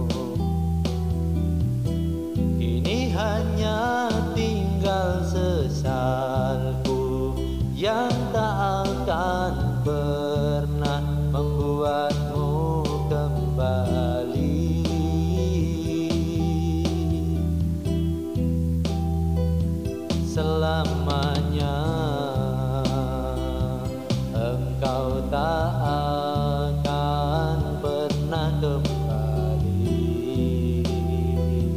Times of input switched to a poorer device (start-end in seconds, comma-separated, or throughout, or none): none